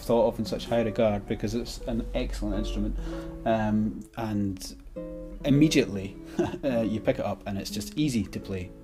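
No technical faults can be heard.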